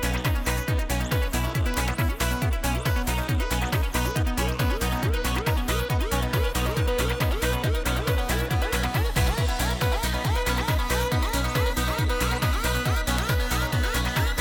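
Six isolated sharp ticks land at 1.74, 4.17, 5.39, 8.39, 11.29 and 13.19 s. Each is a bright, broadband click with no connection to the surrounding sound, peaking at about -8 dBFS (1.74, 4.17, 13.19 s), about -14 dBFS (5.39, 8.39 s) or about -20 dBFS (11.29 s). These are bit error spikes: a flipped bit throws a sample, or a short run of samples, off by a power of two before the value snaps back.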